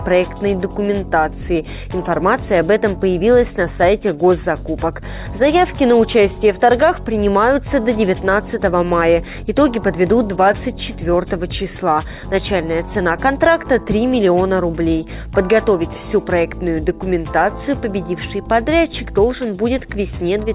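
No faults can be heard anywhere in this recording.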